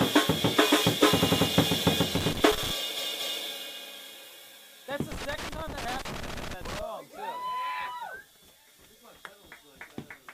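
At 1.19 s the music catches and stutters: a short block of about 93 ms, about two compressed frames' worth, gets played three extra times through 1.47 s. These are repeated frames, where the same chunk of encoded audio was written or sent more than once and the decoder just plays it again. The track runs about 0.28 s longer.

From 2.14 to 2.71 s there's a burst of irregular scratchy crackle, classic loose connector crackle. A worn or dirty contact is making and breaking as it moves, chopping the signal into ragged bits.

Then at 2.95 s comes a bigger repeat. A block of about 232 ms plays twice more through 3.42 s, adding roughly 0.46 s.

The crackle returns for longer, from 5.12 to 6.82 s. Inside it, at 6.25 s, there's one more repeated-frames stutter: a block of about 139 ms played twice more through 6.53 s, adding about 0.28 s.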